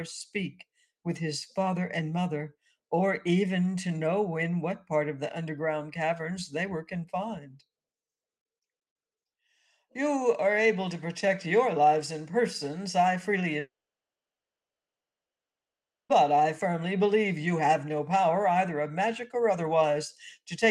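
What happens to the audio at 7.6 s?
Around 7.4 to 7.62 s, sound is cut by the noise suppressor. It mistakes the sound for noise and pulls it down by about 10 dB.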